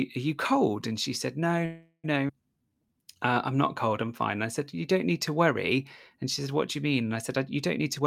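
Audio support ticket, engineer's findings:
Call audio freeze, 1.65–2.06 s: sound stalls, held as a fading continuation with 60 ms of silence, then resumes where it stopped. Likely jitter buffer underrun from delayed packets. Nothing lost, unlike a skip.

Skip ahead, 2.28–2.31 s: abrupt forward jump, only a 10 ms join, about 150 ms of audio gone. Packet loss or jitter buffer overflow. No stall first, unlike the freeze.

Jitter buffer slow-down, 2.57–4.77 s: drawn-out delivery at 93% speed, pitch unchanged, 155 ms added by repeated pitch periods to rebuild reserve. Gradual stretching rather than a single stall.

Jitter buffer speed-up, 7.79 s to end: hurried delivery at 113% speed, pitch unchanged, about 40 ms cut as short pitch-period pieces to shed excess delay. Spread-out trimming, not one jump like the skip.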